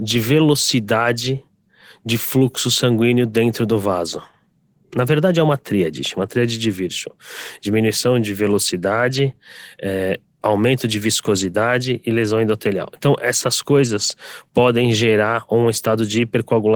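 From start to finish the speech has a grainy, hoarse and slightly robotic edge. The upper band stays present, reaching about 20.2 kHz. This is Opus voice compression in hybrid mode: a linear-prediction coder handles the range below 8 kHz while a transform layer fills in above it, working in 20 ms frames. The plainly audible roughness comes from the excitation being coded coarsely, which fits a bitrate around 16 kbps.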